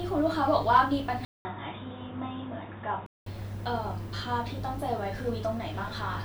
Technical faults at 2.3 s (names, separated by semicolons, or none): input switched to a poorer device